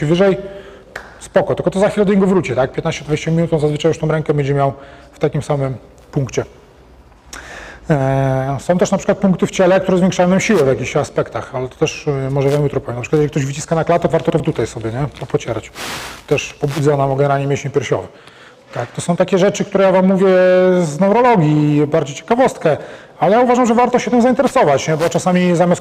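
From 14.1 to 14.4 s the audio briefly jumbles: chunks out of order, with one 100 ms chunk playing two chunks late, creating three hard joins.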